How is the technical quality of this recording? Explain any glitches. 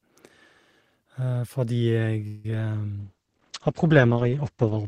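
Three call faults mar the recording, all after the 2-second mark.

At 2.27 s the sound stops moving forward. The last sound stretches into a fading buzz or hiss for about 0.17 s, until 2.45 s. This is likely a call audio freeze: packets stalled in transit and the jitter buffer ran dry, so the receiver extended what it had. Nothing is lost. The speech resumes where it paused, but everything after it arrives about 0.17 s later.

At 2.50 s there is a short concealed packet loss. About 10 ms of audio never reached the decoder in time. The receiver patched the hole by carrying the previous sound forward, then blended back into the real signal. The result is a brief smear or wobble.

From 3.00 s to the end there is a call bitrate drop. The encoder was pushed from 40 kbps down to 12 kbps and stays at the lowest rate for about 1.8 s. At that rate Opus codes coarsely and trims the top of the spectrum, from 20 kHz down to 8 kHz. 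The speech turns duller and rough, losing its crisp high end.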